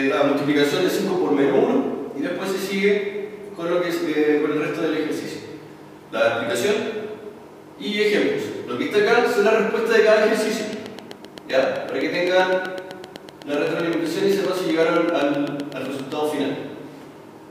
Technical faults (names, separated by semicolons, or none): train of clicks